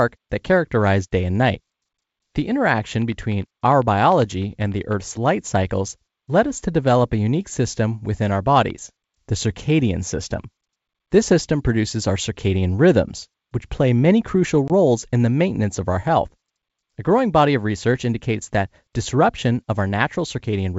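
At 14.68 to 14.71 s, packet loss on an ADPCM call leaves a hard-edged 20 ms silent hole, about one packet. Unlike a simple dropout, the speech resumes with a mismatched predictor and step size while the G.722 decoder resynchronises.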